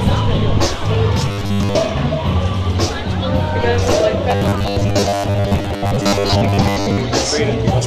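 Robotic sound from repeated short buffers appears from 1.28 to 1.77 s and again, for longer, from 4.31 to 7.01 s. Both times the audio collapses into a rigid, metallic buzz at 100 Hz that only loosely tracks the underlying sound. The likely cause is new audio arriving too seldom, so the playback fills the gaps by looping a 10 ms fragment, skipping most of the real material and stamping that fixed pitch onto it.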